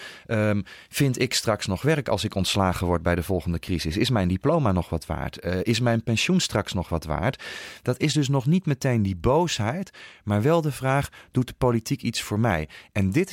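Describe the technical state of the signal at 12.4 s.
At 12.4 s the speech signal is intact, with no audible technical fault at that moment.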